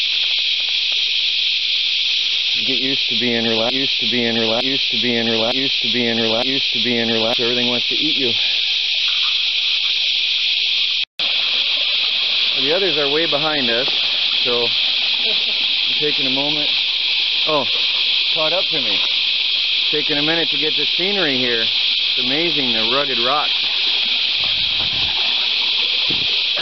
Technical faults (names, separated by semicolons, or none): broken-record loop